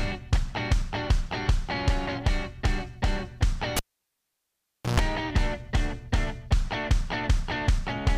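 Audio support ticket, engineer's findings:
Cable pulled and plugged in, 3.77 to 5.00 s. Pop, about 1.18 s near silence, then 60 Hz mains buzz for about 0.13 s as the plug tip alone makes contact, then a second pop when signal returns. Likely a loose input jack or lead. Unlike a digital dropout, the gap has pops at both edges and a buzz before reconnection.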